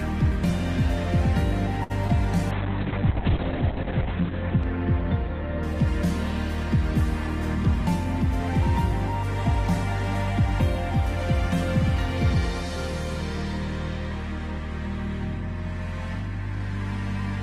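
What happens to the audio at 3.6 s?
A call bitrate drop runs from 2.52 to 5.95 s. The encoder starves and the top end narrows to 4 kHz, consistent with roughly 6 kbps. The sound turns rough and muffled.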